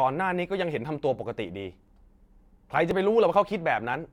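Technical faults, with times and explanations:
0.85 to 3.94 s, clock drift buffer slips: a click recurs every 1.03 s, about four times, each fitting a jump of a few dozen samples, likely from two clocks disagreeing by several hundred ppm. The waveform breaks abruptly; the spectrogram shows thin vertical broadband lines.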